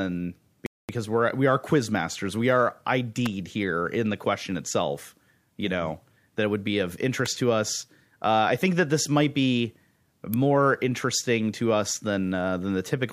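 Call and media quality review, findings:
Playback stall, 0.66 to 0.89 s. Speech cuts to silence mid-flow for about 0.23 s, then resumes. Likely cause: player buffer underrun or a blocked output thread, with the device starved until data arrived again.

Electrical switching spike, 3.26 s, just before "here in the question". Sharp snap riding on top of the speech, likely arcing from a nearby switch, motor or static discharge coupled into the audio line.
Same spike at 7.26 s, between "it would be of" and "to us". Brief snap, same mechanism.
Same spike at 10.34 s, between "that this might be" and "interesting to us than". Very short snap, same mechanism.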